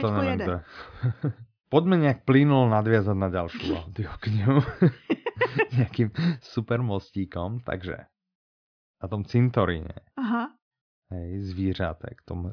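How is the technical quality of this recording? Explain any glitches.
Nothing in the recording stood out as a technical problem on listening, so there are no glitches to explain.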